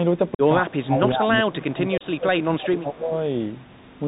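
Throughout, the speech sounds muffled and band-limited, with scratchy s sounds and a grainy hiss underneath. This is the Bluetooth CVSD headset codec, whose narrowband 64 kbps encoding passes nothing above 4 kHz.

At 0.35 to 0.41 s there is an abrupt hole of about 45 ms before the sound returns. This is unconcealed Bluetooth headset packet loss: several voice packets dropped, and silence or an idle pattern took their place. A second, shorter hole of about 30 ms appears at 1.98 to 2.03 s.

From 0.62 to 1.29 s the speech dips by about 15 dB in patches. From 1.45 to 3.13 s it dips deeper, by about 20 dB, and the losses add up to roughly one and a half seconds. Both stretches are likely speech suppressed in double talk, where an echo canceller turned the talker down while the far side spoke.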